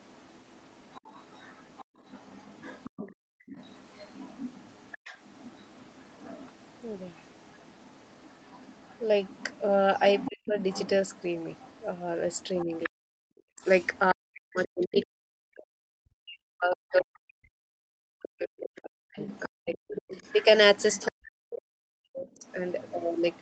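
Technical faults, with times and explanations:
0.0–15.63 s, 18.58–21.08 s, 22.31–23.42 s: other side's voice leaking through. A second voice sits under the talker, strongest at 18.58–21.08 s, likely as uncancelled loudspeaker echo.
1.85–1.98 s, 3.15–3.46 s: background gated by the echo canceller. The room tone drops by about 37 and 39 dB and then returns.
10.28–10.56 s, 12.66–20.17 s, 21.08–22.44 s: speech suppressed in double talk. The talker's own voice dips by around 40 dB in pieces, likely because both sides overlapped and the canceller ducked everything.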